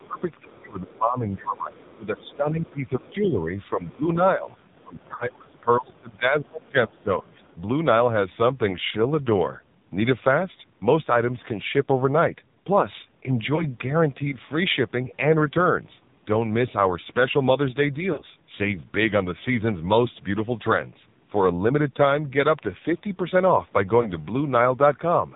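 Throughout, the speech carries heavy AMR narrowband mobile codec damage: nothing above 4 kHz, with a buzzy, synthetic texture that fits a low AMR-NB mode around 5.9 kbps. From 0.0 to 7.44 s the speech is pulled down by up to about 20 dB for roughly five seconds in total, likely speech suppressed in double talk, as the echo canceller ducks the talker while both sides speak. In the same stretch, the other side's voice leaking through appears as faint scraps about 25 to 40 dB below the speech at 0.57–0.65, 1.76–2.35, 2.67–3.14, 4.47–5.05, 6.96–7.03 and 7.41–7.55 s, likely residual echo that was not cancelled. Lost AMR speech frames cause brief drawn-out warbles and fading dropouts at 5.16–5.28 s (about 40 ms lost), 13.56–13.66 s (20 ms), 18.12–18.22 s (60 ms) and 24.02–24.08 s (20 ms), where the decoder concealed missing frames before the speech returned.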